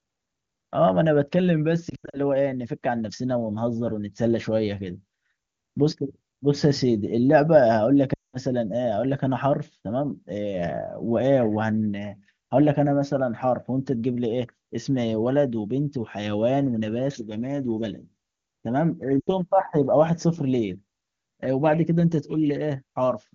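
Lost AMR speech frames break up the speech at 1.89 to 2.20 s, 8.13 to 8.37 s and 19.20 to 19.32 s. The decoder repeats the last good frame with falling gain. Each gap drops quickly toward near silence, then returns weak.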